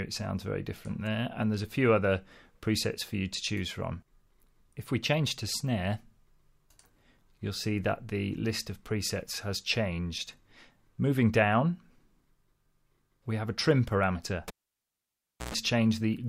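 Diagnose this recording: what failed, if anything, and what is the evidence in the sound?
A live cable was pulled and plugged in again in the analogue wiring. At 14.48 s a pop cuts the sound to near silence for about 1.01 s; a 60 Hz mains buzz lasting 115 ms follows as the tip makes contact, and another pop at 15.54 s restores the audio.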